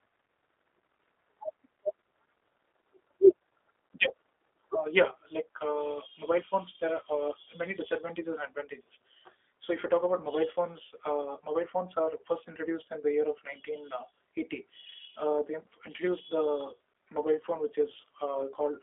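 Throughout, a G.729 codec rebuilds the speech from a filter-and-pulse model, which fits 8 kbit/s. With nothing above 3.7 kHz, it sounds muffled, rough and synthetic.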